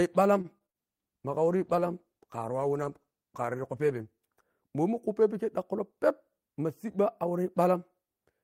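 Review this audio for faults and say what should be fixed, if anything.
Repeated packet loss (robotic sound) runs from 0.41 to 0.76 s: four short holes, the longest 40 ms, each patched by stretching the preceding sound, so about 31% of that stretch is synthetic and turns choppy with pieces missing. Unlike a steady codec artefact, it comes and goes in quick bursts. A larger jitter buffer and forward error correction would help prevent it.

A call bitrate drop follows from 0.80 to 4.74 s, with the encoder falling from 32 to 15 kbps and staying at the lowest rate for about 3.1 s. Coarser coding makes the speech rough and watery and dulls the top end. Unlike packet loss, the degradation is continuous rather than broken into gaps. Keeping enough bandwidth headroom and setting a higher bitrate floor would help prevent it.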